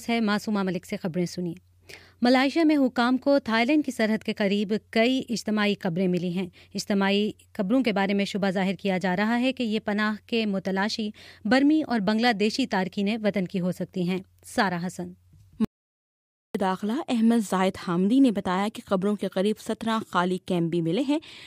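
At 15.65 s the input feeding the recording was cut off, likely through a dropped connection or an accidental mute, while the recorder kept writing silence. The result is an audio dropout to silence lasting about 0.9 s, until 16.55 s. The sound stops abruptly mid-flow and resumes just as abruptly. The gap is dead silence with no room tone or background left in it, and whatever sounded during those 900 ms is simply missing.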